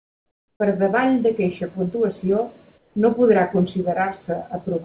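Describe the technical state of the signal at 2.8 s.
From 2.78 to 2.96 s the background thins into a steady, featureless hiss about 4 dB quieter than the real ambience. That is comfort noise in place of the background, likely because discontinuous transmission paused the sender and the receiver filled those 180 ms synthetically.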